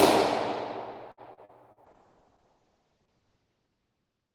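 Repeated packet loss (robotic sound) from 1.11 to 1.79 s: four short holes, the longest about 61 ms, each patched by extending the previous sound, leaving it choppy.

Call bitrate drop from 1.87 s to the end: the encoder fell from 32 to 6 kbps, narrowing bandwidth from 20 kHz to 8 kHz, so the sound turns rough, watery or muffled.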